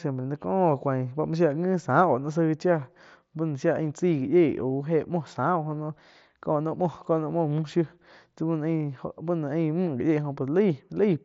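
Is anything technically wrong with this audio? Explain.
Yes. At about 0.42 s there is a brief concealed Bluetooth headset packet loss, roughly 15 ms, which fits two lost frames. The receiver covered the gap by repeating a closely matching stretch of the preceding waveform. It leaves a buzzy blip and a slight warble as normal audio resumes. A plain dropout would leave a silent gap or click instead. Through the mSBC headset codec, the sound carries wideband content up to 8 kHz with light graininess.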